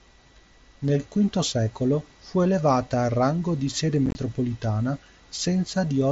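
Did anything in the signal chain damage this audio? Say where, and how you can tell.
Yes, on the wireless link. Unconcealed Bluetooth headset packet loss hits 4.06 to 4.15 s, after "al rango di sede". Dropped packets became abrupt silent holes, the longest 22.5 ms.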